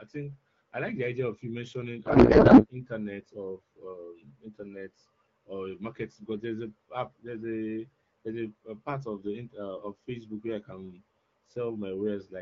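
From 2.05 to 2.66 s, the speech gives way to a codec payload misread. The decoder keeps receiving frames that look valid, but it takes their fields from the wrong bit positions. The pattern fits octet-aligned AMR packing being read as bandwidth-efficient. For about 0.6 s, garbled noise and warble replace the speech, barely tracking it. Outside this stretch, the AMR wideband (HD Voice) codec sounds clear, consistent with 12.65 kbit/s.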